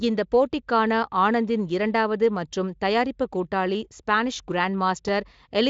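No technical faults are audible.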